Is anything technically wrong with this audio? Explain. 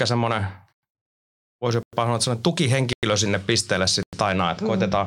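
Yes, there's a gap between chunks. At 0.73, 1.83, 2.93 and 4.03 s the speech drops into about 100 ms of hard-edged silence. It looks like the audio was handled in 1 s chunks with dead air inserted at each join, so nothing's missing, just chopped up.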